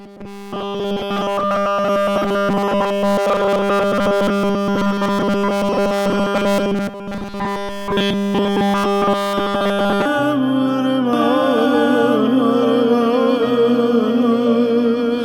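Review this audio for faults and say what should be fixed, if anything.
Robotic sound from repeated short buffers runs from 0.01 to 10.06 s. A rigid 200 Hz buzz replaces the sound. Nearly all of it is a likely 5 ms buffer being repeated. Prevent this by keeping input buffers fed, with enough headroom against scheduling stalls.

A doubled audio track starts at 11.13 s and lasts to the end. An equally loud copy trails by about two seconds, likely from a second capture path. Prevent this by routing each source through only one capture path.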